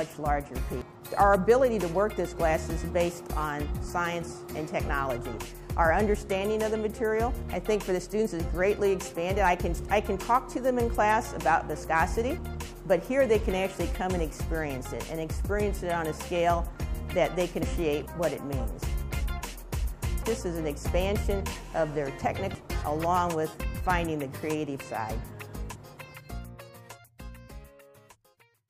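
At 0.82, 17.63, 20.23 and 22.55 s, damaged data in a compressed stream makes the decoder misread frames and lose sync, giving a brief chirp, squawk, click or short hole. Its coded character sets it apart from a plain digital dropout.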